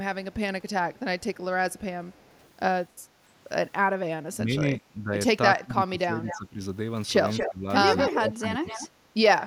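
From 0.32 to 2.49 s, a very faint echo leak trails the speech by 291 ms. A far-end echo canceller likely left some loudspeaker pickup in the return path. Between 4.34 and 6.59 s the speech is suppressed in double talk. It dips by roughly 15 dB for about 1.5 s in pieces. A canceller likely mistook the talker for echo while both sides spoke. From 6.27 to 6.39 s a brief, fairly strong echo follows 232 ms behind. The same canceller likely let it through. From 7.3 to 8.88 s the 232 ms echo returns, nearly as loud as the speech. This leak likely has the same cause. Inside it, from 7.39 to 8.76 s, double-talk suppression again cuts the speech by roughly 15 dB, for about 0.7 s in total. Its likely cause is the same confusion between talker and echo.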